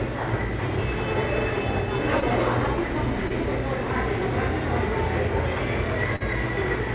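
Three short concealed packet losses break up this sound, which is band-limited to 4 kHz by the G.711 mu-law call path. At 2.20 s and again at 3.28 s, about 20 ms of audio arrived too late to play. The receiver bridged each gap by extending the preceding sound. At 6.16 s a longer 40 ms hole gets the same repair. Each shows up as a brief smear or wobble.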